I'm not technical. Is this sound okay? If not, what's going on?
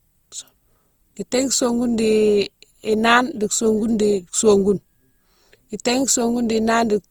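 No. The speech has likely been squeezed and unsqueezed by the same lossy compression about five times over, which causes generation loss. Each pass adds fresh damage, so throughout the clip it sounds swirly, smeared and hollow, and sharp starts of sounds blur.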